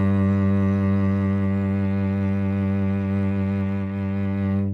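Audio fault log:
No audible faults found.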